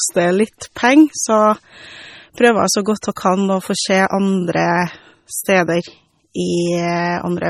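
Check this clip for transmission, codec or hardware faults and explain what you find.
Two kinds of fault are audible: codec damage across the whole speech clip, and two brief pre-echoes just after 3 seconds.

MP3 compression, throughout: the speech sounds watery and swirly, with heavy smearing and nothing above 18.7 kHz. This is likely MP3 encoding at a low bitrate, consistent with about 32 kbps. The starved encoder drops the top band and switches weak frequency components on and off between frames.

Pre-echo, at 3.01 s and 3.16 s: each sharp onset is preceded by a short hiss, about 18 ms before the first and 13 ms before the second, and both onsets sound soft. The codec spread quantisation noise sized for the loud attack across its whole block, filling the quiet lead-in.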